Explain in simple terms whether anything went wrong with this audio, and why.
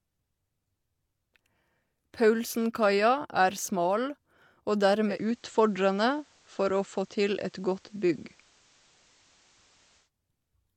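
From 5.07 to 10.10 s there is digital radio blending to analogue. The radio fell back to FM, adding faint hiss.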